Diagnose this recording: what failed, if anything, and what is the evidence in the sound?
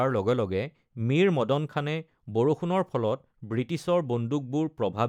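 Nothing failed in this recording, and the sound gives no evidence of any fault.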